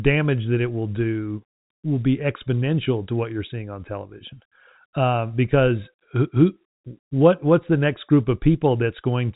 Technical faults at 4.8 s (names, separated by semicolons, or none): none